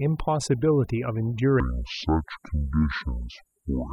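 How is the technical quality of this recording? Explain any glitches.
The technical quality is poor, with two clear faults in the speech.

Overdone noise removal runs through the whole recording. A noise reduction stage was set far too aggressively, pushing individual frequency bands down or out whenever they came close to its noise estimate, and it took the quieter parts of the voice along with the noise. The result is a background that drops away, broken by twinkling, chirpy specks.

From 1.60 s to the end, there is a section at the wrong speed. This was likely caused by the audio being played against the wrong clock, so this stretch runs at 0.578 times its recorded speed. Because speed and pitch move together, the voice suddenly drops by close to ten semitones and drags, sounding deep, slow and sluggish compared with the first part of the clip.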